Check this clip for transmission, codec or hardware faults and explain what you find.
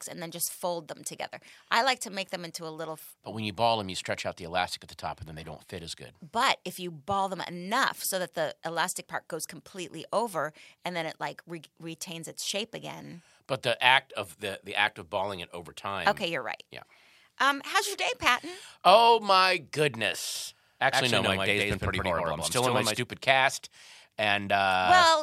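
One fault turns up, a doubled audio track, from 20.35 to 22.97 s. For those seconds the speech is heard twice. A second full-band copy trails the first by about a tenth of a second, at roughly the same level. The likely cause is the signal being captured again through a slower path, or an edit leaving two copies out of step. The copy has no decay or room colour. It starts and stops abruptly.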